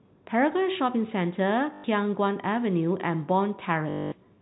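Packet loss with last packet repeated, from 1.74 to 1.84 s and 3.9 to 4.12 s: the receiver looped stale audio, producing robotic stutters buzzing near 50 Hz, which fits 20 ms packets.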